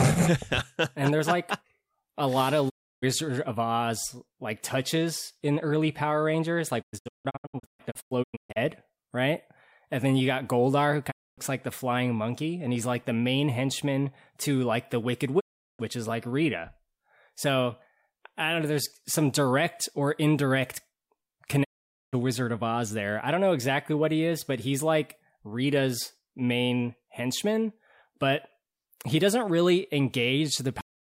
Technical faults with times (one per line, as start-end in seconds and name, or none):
2.68-3.04 digital broadcast dropout
6.81-8.58 digital broadcast dropout
11.10-11.39 digital broadcast dropout
15.39-15.81 digital broadcast dropout
21.63-22.15 digital broadcast dropout
30.81-31.13 cut-off end